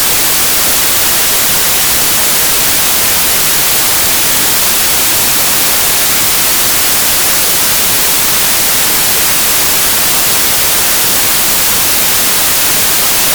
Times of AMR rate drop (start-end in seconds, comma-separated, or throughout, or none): none